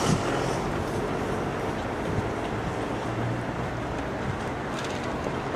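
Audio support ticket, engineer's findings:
Regular clicks, every 0.94 s from 0.72 s to 5.42 s, about seven in all. Clock drift buffer slips, likely between two independently clocked devices: a clock mismatch of a few hundred ppm, each slip dropping or repeating a dozen or so samples.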